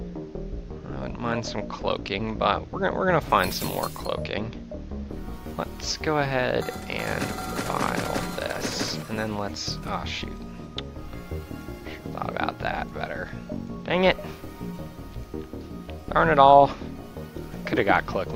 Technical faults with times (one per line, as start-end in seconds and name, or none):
none